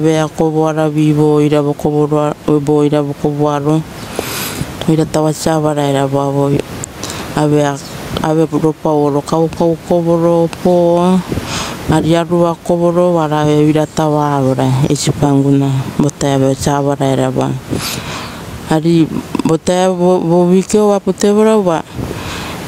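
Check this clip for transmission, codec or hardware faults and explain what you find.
There's one real fault here, gain pumping, and it runs the whole way through. The level ducks under each loud stretch of speech and the background swells back up in the pauses, a swing of roughly 15 dB. That's likely the input gain set far too high with a fast limiter clamping down on every peak, leaving everything squashed and breathing. The room noise underneath, sitting about 28 dB below the speech, is just the space itself and is what you hear rising in those gaps.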